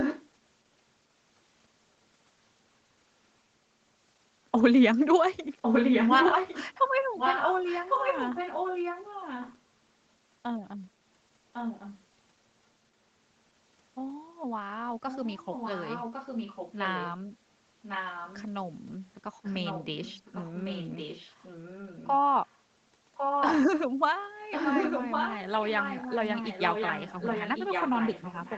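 Echo leak in this speech clip at 0–0.24, 5.62–9.6, 11.53–11.95, 15.08–17.16, 17.82–18.44, 19.44–22.59, 23.15–23.61 and 24.51 s to the end. A copy of the speech returns about 1.1 s later, sometimes as loud as the original and sometimes well below it. The likely cause is a far-end loudspeaker feeding its microphone past an incomplete echo canceller. Both copies are band-limited to 8 kHz by the call path.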